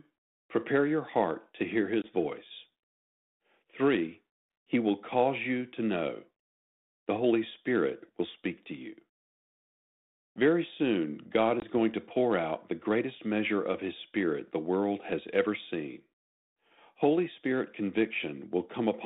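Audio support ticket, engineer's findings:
Packet loss on an ADPCM call at 2.02 s and 11.6 s. Each is a hard 20 ms gap of silence, roughly one packet dropped. The decoder's adaptive predictor and step size fall out of step with the sender. After each hole, speech is slightly distorted briefly until the state reconverges. The disturbance runs to 2.1 s and 11.66 s. Path is 32 kbit/s G.726 with light codec grain, band limited to 200 Hz to 3.7 kHz.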